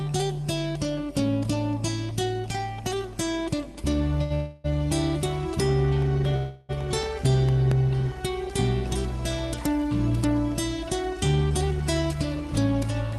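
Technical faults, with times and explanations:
4.23–4.32 s, short stall from a late packet: the sound hangs for about 68 ms, a slightly buzzy held tone, then carries on from exactly where it left off. A packet showed up late, the jitter buffer ran dry, and the receiver stretched the last bit of audio to cover the wait, so nothing's lost.
4.34–4.66 s and 6.36–6.71 s, call audio freeze: two longer holds, about 0.3 s and 0.33 s, where the last sound drags on as a fading buzz instead of dropping to silence, then the audio resumes with nothing skipped. The likely cause is packets held up in transit, leaving the jitter buffer empty while the receiver filled the gap.
5.80–8.17 s, CD scratch ticks: ten small regular ticks across about 2.4 s, each at most roughly 3 ms. That's a disc blemish wiping out more data than error correction can rebuild once per revolution, with the player patching or muting the damaged samples, and they sit on top of the Opus call path's roughly 12 kHz top end.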